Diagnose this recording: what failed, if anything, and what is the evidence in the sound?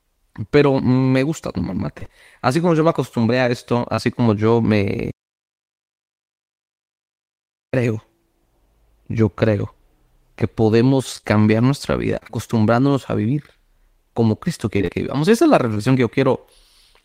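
Repeated packet loss (robotic sound) in the network stage: packets went missing in clusters, and the receiver kept bridging each hole by extending the last sound. From 1.99 to 2.11 s, about 60 ms was lost in three gaps up to 25 ms long, so roughly half that short stretch is synthetic. From 11.17 to 12.35 s (about 120 ms lost, gaps up to 23 ms) and 14.77 to 15.81 s (about 100 ms lost, gaps up to 29 ms), the speech turns choppy.

Short concealed packet loss, also in the network stage: around 20 ms of audio failed to reach the decoder in time at 3.95 to 3.99 s. Concealment filled the hole by continuing the preceding sound, using its pitch if voiced or shaped noise if not, and then crossfaded back into the real signal. The result is a brief smear or wobble in the speech, and a short consonant there can disappear.

Audio dropout to silence: the input path stopped delivering signal while the recorder kept writing silence, most likely because of a disconnected device or a failed capture link. 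The speech cuts off abruptly at 5.12 s and resumes mid-flow at 7.73 s, leaving about 2.6 s of silence with no room tone. That absence of background noise is what separates it from a natural pause. Whatever was spoken in that gap is lost.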